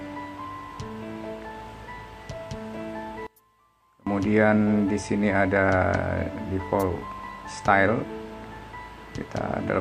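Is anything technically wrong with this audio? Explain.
Yes. From 3.27 to 4.07 s the sound drops about 27 dB, nearly vanishing. Likely one channel inverted, so shared content cancels in mono.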